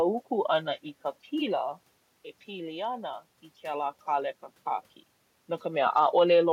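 No technical faults are audible.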